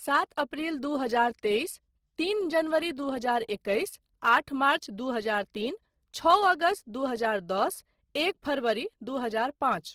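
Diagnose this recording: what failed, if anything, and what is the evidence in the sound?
The failure is at the codec stage and runs through the whole clip. The speech has a plainly audible rough, grainy, noisy texture, likely from Opus compression in its music (CELT) mode at a low rate, consistent with about 16 kbps. The encoder fills starved bands with folded or noise energy rather than leaving them empty. A spectrogram would therefore show content up to 20.2 kHz with few holes, but with speckled, smeared upper bands instead of clean harmonics.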